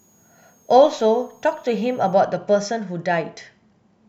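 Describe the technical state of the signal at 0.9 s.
A switching supply whistle runs from 0.0 to 2.13 s, covering 0.9 s. A switching power supply cycling at an audible rate leaks a faint high tone, wandering between about 6.3 and 6.7 kHz, well beneath the speech.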